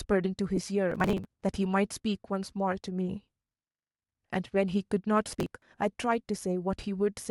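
Speech, with two kinds of fault. At 0.56 s there are lost LE Audio frames. About 15 ms of sound goes missing, which points to roughly two frames. The decoder fills the gap by repeating the last spectrum with scrambled phase, so the voice briefly smears into noise. Processor overload crackle appears from 0.92 to 1.42 s and again from 5.33 to 5.62 s. The processor falls behind and skips many short buffers in a row. The buffers seem to be around 10 ms each. Each skip leaves a hard-edged gap, and together they form a gritty, tearing crackle.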